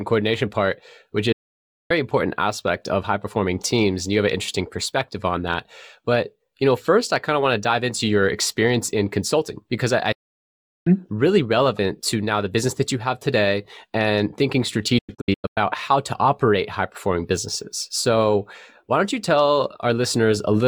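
Speech with three digital broadcast dropouts: the receiver lost valid frames and muted, fading out within about 8 ms. It goes silent for 0.59 s from 1.32 s after "coordination part which", and for 0.75 s from 10.12 s after "consulting because I I". From 14.98 to 15.58 s, after "have today and thinking", it breaks into several short holes of up to 96 ms, pointing to scattered corrupt frames.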